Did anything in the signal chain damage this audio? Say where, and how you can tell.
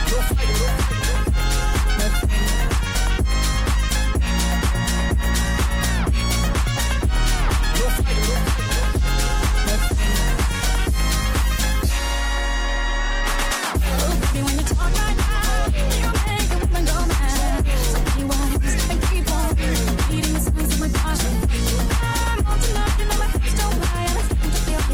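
No, nothing audible points to damage at any stage of the signal chain; the sound stays continuous and stable throughout, with no sign that wiring, conversion, buffering, processing, transmission, storage or playback altered it.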